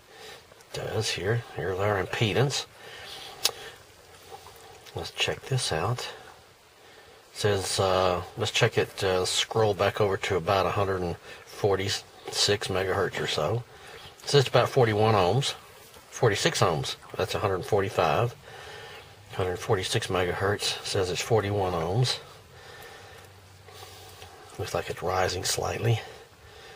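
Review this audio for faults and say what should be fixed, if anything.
Nothing to fix: no faults found anywhere in the clip.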